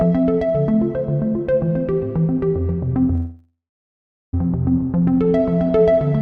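At 3.15 s the audio stalls until 4.34 s. This is a call audio freeze. The last sound carries on as a fading buzz, then drops to silence for about the final 0.75 s of the stall. The likely cause is packets held up in transit, so the jitter buffer ran empty and the receiver filled the gap itself. When the audio resumes, it picks up where it stopped. Nothing is lost, but everything after runs about 1.18 s late. The top end stops near 12 kHz, which fits an Opus call link.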